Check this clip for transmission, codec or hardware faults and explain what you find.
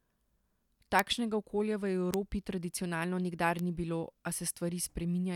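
Three bit error spikes turn up in this speech, at 0.99 s, 2.14 s and 3.59 s. Each is a flipped bit briefly throwing a sample value off by a power of two. You hear a sharp, broadband tick unrelated to the speech, peaking around -6, -12 and -18 dBFS.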